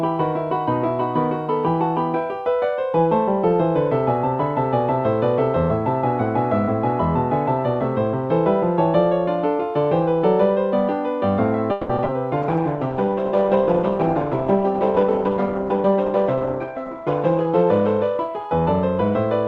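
From 11.71 to 12.15 s there is repeated packet loss (robotic sound). Five holes in quick succession are patched by stretching the last sound, so about half that stretch is concealment, the longest about 180 ms. That gives it a choppy sound with pieces missing, unlike a single dropout.

At 12.43 s a call bitrate drop sets in and lasts to the end. The Opus coding turns rough and watery, and the top end falls from 12 kHz to 8 kHz, which fits a fall from about 40 to 12 kbps. The dulling stays, with the lowest quality holding for about 4.4 s, rather than coming and going in bursts.

From 12.57 to 13.41 s a jitter buffer slow-down plays the audio at 94% speed, repeating pitch periods to add about 61 ms. Sounds are drawn out at unchanged pitch, not lowered as a tape slow-down would be.

Jitter buffer speed-ups follow from 14.98 to 16.35 s at 110%, trimming roughly 150 ms, and from 16.77 to 17.47 s at 105%, trimming roughly 40 ms. 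The audio sounds hurried while the pitch holds steady, which separates this from a simple faster playback.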